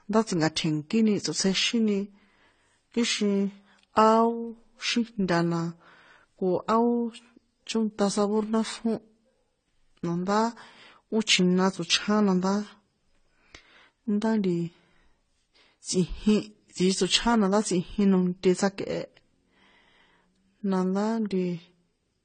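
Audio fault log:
throughout, transcoding between lossy codecs: the speech likely passed through successive AAC-type encoders, so mixed compression artefacts pile up and nothing remains above 9 kHz.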